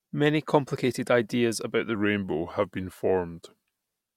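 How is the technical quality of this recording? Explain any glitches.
The recording has one glitch: a section at the wrong speed. From 1.95 s, right after "complicated ideas about the", to the end, playback drops to 0.893 times normal, likely from that stretch being run against a mismatched clock. Speech turns slower and sits roughly two semitones lower.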